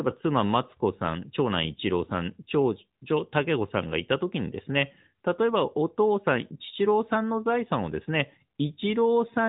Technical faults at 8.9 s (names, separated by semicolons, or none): AMR narrowband mobile codec